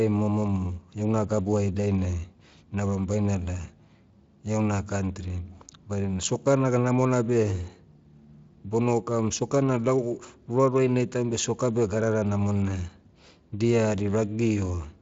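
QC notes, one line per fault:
No faults to log here, just speech carried over a Speex link whose top end tops out around 7.5 kHz.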